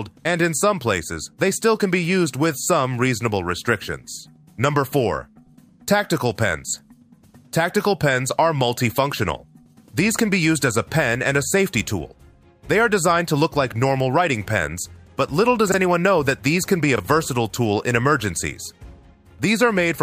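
Chunks out of order at 15.68–15.74 s and 16.96–17.0 s: 20 ms blocks play two, then one, slot late, giving a jumbled moment; waveforms show three abrupt discontinuities each.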